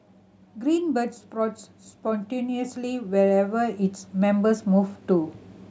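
From 0.59 s to 5.39 s, automatic gain rising lifts the speech and background together by about 9 dB, a slow swell as the control chases a quiet input.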